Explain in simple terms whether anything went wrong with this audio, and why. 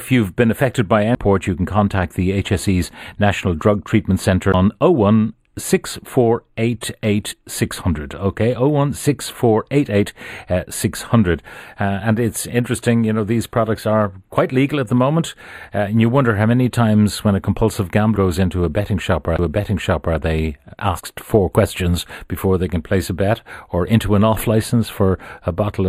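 Throughout the clip, one channel arrives a fraction of a millisecond late, and the two are mixed together. This channel delay (comb filtering) cancels certain frequencies, starting around 5 kHz, so the speech sounds hollow and slightly dull.

At 1.15, 4.52 and 19.37–19.39 s, the player lost its place on the disc. Each CD skip causes a brief tick of silence, lasting only a split second, and the audio then resumes from a different point.

At 7.30–7.32, 18.15 and 20.98–21.00 s, chunks of the compressed file were never played. These skipped compressed frames are 23.2 ms long each, so the audio jumps ahead by roughly 50, 150 and 70 ms.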